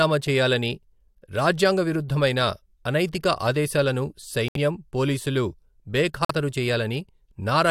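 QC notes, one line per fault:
4.48–4.57 s, corrupt frame muted: damaged compressed frames were rejected by the decoder and replaced with silence, leaving an abrupt 80 ms hole right after "రాజ్యాంగ విరుద్ధమైన అనైతిక ఆదేశాలను", which fits about three frames lost, with timing preserved.
6.25–6.31 s, corrupt frame muted: the same rejection cuts a sudden 60 ms gap into the speech, consistent with two frames dropped.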